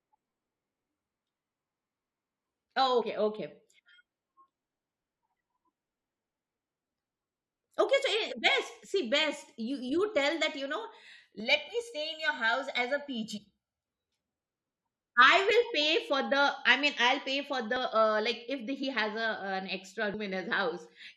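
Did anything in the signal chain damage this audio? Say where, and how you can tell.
Yes. At 2.64 s and at 17.76 s, after "mean I'll pay for", the audio jumps ahead by about 40 ms. This is likely a dropped buffer (overrun) in the driver or buffer stage.

At 3.01–3.03 s, 13.36–13.38 s and 18.80–18.84 s, after "like if the", the audio skips about 50, 70 and 20 ms. These are compressed frames skipped at the codec.

From 11.40 to 13.86 s, after "tell that you know", the sound turns hollow and phasey. This is channel delay (comb filtering): one channel about 1.5 ms late, summed to mono, notching from around 400 Hz.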